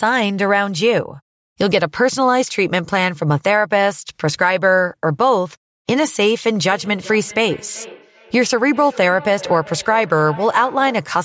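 From 6.65 to 11.18 s the speech returns as a thin, ringing copy about every 0.4 s, at most about 19 dB below the original. This is feedback echo between two devices: a second device's loudspeaker reaches this microphone, and its echo canceller cannot remove that sound.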